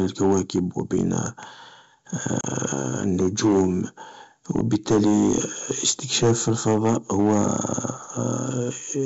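From start to finish, the speech is driven about 8 dB beyond what one stage of the chain can pass, so the loudest peaks are sliced flat. This is hard clipping. The squared-off tops add a spray of upper harmonics, and only a small fraction of samples, around three percent, exceed the limit. So the damage is a gritty crackle on louder syllables and stressed onsets rather than constant fuzz.

At 2.41 s, through to 2.45 s, a short run of packets on the ADPCM call goes missing, about 30 ms of audio, and the gap is filled with silence. This is packet loss on an ADPCM call. Because ADPCM decodes each sample relative to its predictor and step size, the receiver's state no longer matches the sender's when audio resumes. The result is a sharp-edged dropout, then slightly distorted speech until the decoder recovers. The wideband G.722 path itself stays clean and extends well above 4 kHz, running in its full 64 kbit/s mode.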